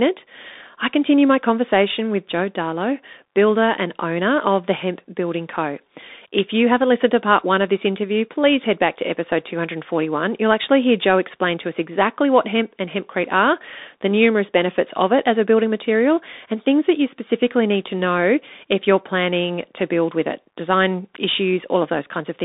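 Speech heard through a Bluetooth CVSD headset codec for the whole clip: nothing passes above 3.8 kHz, the band sits between 250 Hz and 3.7 kHz, and the plainly audible granular hiss and scratchy s sounds, which fit a 64 kbps one-bit stream, set it apart from a clean telephone band-limit.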